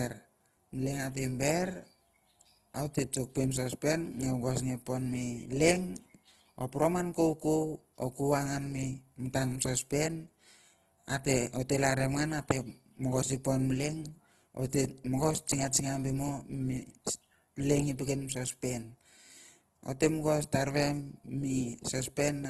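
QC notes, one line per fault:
Throughout, Opus compression: an Opus encoder, likely in its CELT music mode, running at a starved rate that fits 16 kbps, patches bit-short bands with borrowed or noise-like content, leaving plainly audible grainy, rough speech and nothing above 12.4 kHz.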